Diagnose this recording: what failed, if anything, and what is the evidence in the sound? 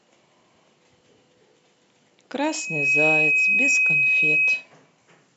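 What went wrong here is loudspeaker feedback squeal, an acoustic loop between the playback system and the mic rather than anything digital. At 2.38 s a single tone at 2.5 kHz starts to swell, taking around half a second to build, and it holds until 4.67 s, riding roughly 10 dB above the speech. The mic is picking up its own loudspeaker, and at that one frequency the loop gain tops unity, so the tone feeds itself until something limits it.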